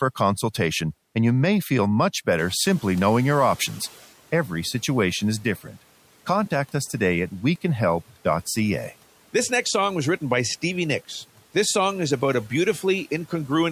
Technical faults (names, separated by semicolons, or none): noise suppressor catching up; speech cut by the noise suppressor